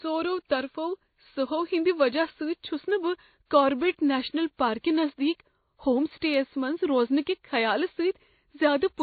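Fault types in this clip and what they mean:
Transcoding between lossy codecs: speech stops at 4.5 kHz with two layered sets of artefacts, likely low-rate MP3 re-encoded as WMA, not one codec's.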